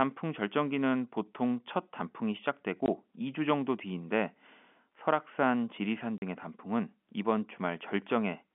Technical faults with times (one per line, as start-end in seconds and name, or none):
2.86-2.88 packet loss filled with silence
6.18-6.22 packet loss filled with silence